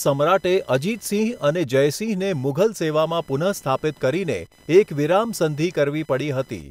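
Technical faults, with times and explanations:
Throughout, computer activity noise: a faint buzz near 1 kHz, well below the speech, from computer load changes disturbing the shared audio ground; it tracks computer activity rather than the sound, unlike steady mains hum.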